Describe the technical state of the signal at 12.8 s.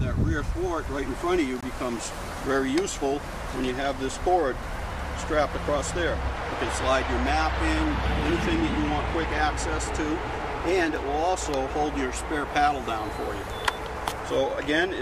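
At 12.8 s the signal is intact, with no audible fault at that moment.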